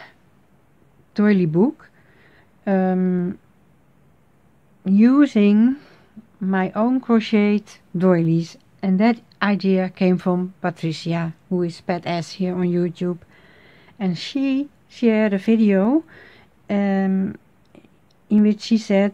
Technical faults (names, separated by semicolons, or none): clock drift buffer slips